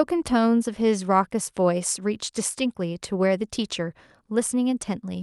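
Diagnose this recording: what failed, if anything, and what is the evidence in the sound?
Nothing in the speech stood out as a fault on listening, and none of the stages shows any audible evidence of failure.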